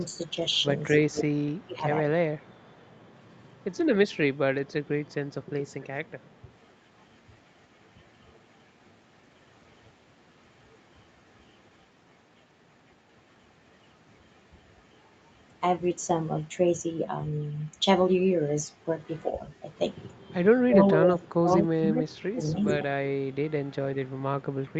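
At 0.32 to 0.36 s the speech dips briefly, about 5 dB, and from 1.1 to 1.85 s it drops much harder, by about 20 dB, with roughly 0.4 s of it pulled down in patches. This is speech suppressed in double talk, likely from an echo canceller that could not tell the near talker from far-end sound and ducked both. On a waveform the envelope caves in abruptly. On a spectrogram the harmonics fade or break into gaps while the surrounding speech stays dense.

Overlapping that stretch, from 1.15 to 1.65 s, a delayed copy of the sound trails the original by 240 ms at only about 5 dB below it. This is an echo leak, likely residual loudspeaker pickup that the canceller failed to remove. Fainter leaks follow at 2.38 to 3.43 s (again 240 ms, about 35 dB down) and at 5.8 to 5.87 s (268 ms, about 30 dB down). On a spectrogram each shows as a ghost of the harmonic pattern shifted right in time.

From 20.66 to 22.65 s suppression returns, dropping the level by up to about 25 dB over roughly 1.5 s. 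It sounds chopped, and the envelope flattens in ragged steps. Above all of this, the spectrum stops at 8 kHz, consistent with the Opus call path at that bandwidth.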